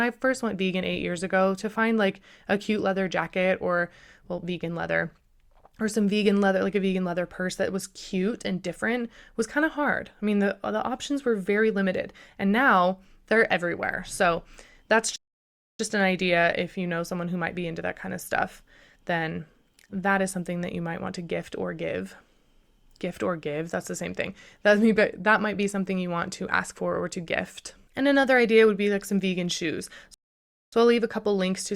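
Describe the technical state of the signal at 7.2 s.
At 7.2 s the speech signal is intact, with no fault audible at that moment.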